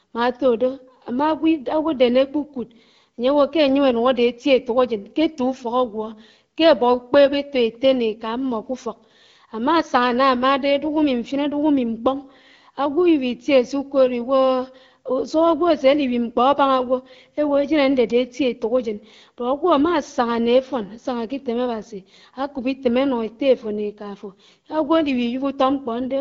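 Speech over the AMR wideband (HD Voice) codec at 12.65 kbit/s, its band topping out near 7.4 kHz as that path dictates, with no faults to report.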